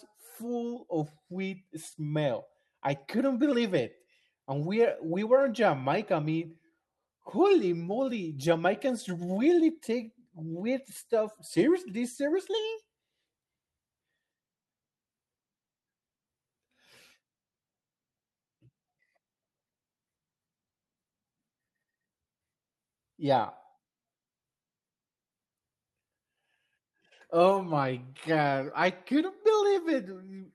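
Nothing stood out on listening to this speech recording; the call-codec path shows only the band-limited top end expected from its roughly 12 kHz bandwidth.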